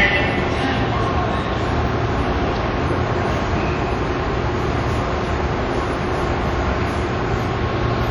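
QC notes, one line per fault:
Throughout: WMA compression, likely the cause of the ringing, washy texture and hiss that swells and recedes with the sound. Long transform blocks smear quantisation noise over tens of milliseconds, weak components drop out, and nothing remains above 18.9 kHz, consistent with a bitrate around 48 kbps.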